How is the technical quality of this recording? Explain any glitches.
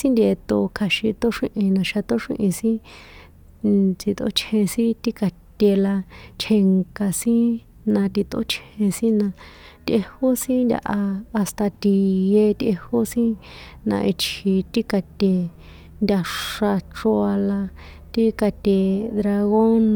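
No glitches or technical faults can be heard here.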